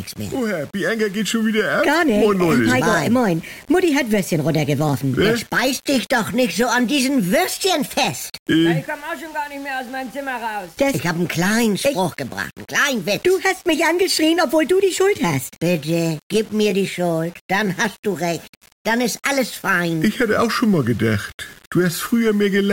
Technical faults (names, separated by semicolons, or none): low bit depth without dither